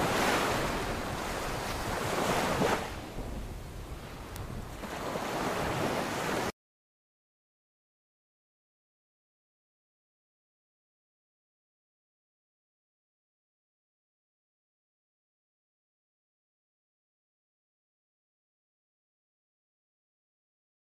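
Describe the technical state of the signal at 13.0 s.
At 13.0 s the signal is intact, with no technical fault audible at that moment.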